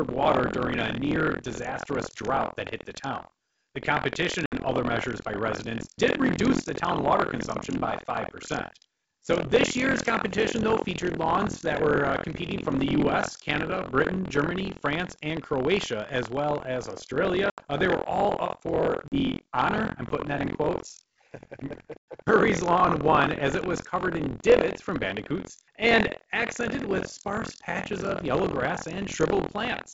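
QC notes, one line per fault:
throughout: buffer tearing. A steady robotic buzz at 43.1 Hz rides on the speech and drops away in pauses, so it exists only while signal is present. The writer and reader of the output ring buffer have drifted and cross inside each period. About a fifth of every buffer repeats audio from roughly 70 ms earlier, with hard joins at both ends. The buzz rate fits a 1024-sample buffer.
4.46–4.53 s, 17.50–17.61 s, 19.08–19.16 s, 21.99–22.04 s: packet loss on an ADPCM call. Silent, hard-edged holes of 60, 80, 40 and 100 ms appear: the first just before "other measures by residents", and the third between "were all up for" and "honor I'm putting that". Each points to a few lost packets filled with silence. Speech comes back with brief distortion because the decoder's predictor and step size no longer match the sender's. It settles within tens of milliseconds. The underlying G.722 wideband audio shows at most faint coding damage.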